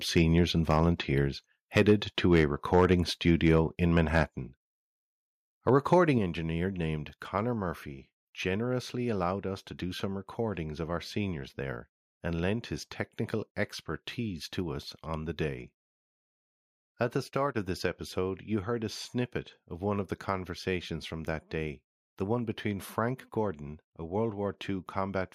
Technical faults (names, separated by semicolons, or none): microphone overload; microphone volume stepped down